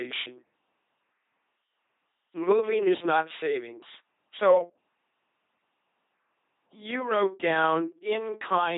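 LPC-10 vocoder damage runs throughout the speech. Each moment is rebuilt from a pulse train or noise driving a filter of at most ten poles, giving a heavy buzzing, mechanical robot voice with nothing above 3.8 kHz, consistent with a 2.4 kbit/s coder.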